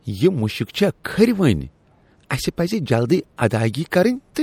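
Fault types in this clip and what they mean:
MP3 compression: a watery, swirling top end with smeared consonant attacks, likely from lossy encoding at about 64 kbps, unlike plain low-pass filtering, which sounds dull but stays clean.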